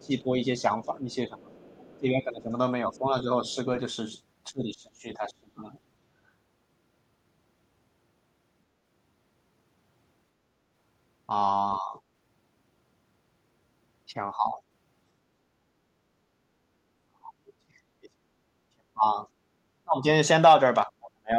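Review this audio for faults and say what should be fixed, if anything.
Speech suppressed in double talk: the talker's level dips, by about 15 dB at first and up to about 35 dB late, at 0.0–3.58 s, 4.52–5.77 s, 11.8–11.96 s, 14.35–14.6 s and from 17.06 s to the end. This is likely an echo canceller muting near-end speech while the far end talks. Tune its double-talk detector to favour near-end speech.

Other side's voice leaking through: a faint second voice, about 30–35 dB below the speech, appears at 0.02–0.06 s, 1.55–1.99 s and 2.97–3.55 s. This is likely residual loudspeaker echo that the canceller left in the microphone signal. Improve echo-path adaptation or reduce loudspeaker-to-microphone coupling.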